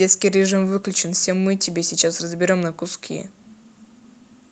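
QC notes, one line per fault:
The speech comes through a WebRTC call path with its highest frequencies stopping at 8 kHz, as expected from an Opus codec in wideband mode, and no faults can be heard in it.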